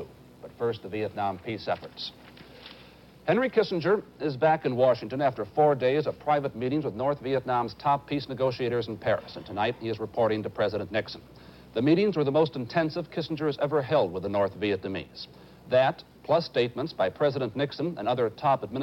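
Nothing stood out as a technical fault on listening to this audio.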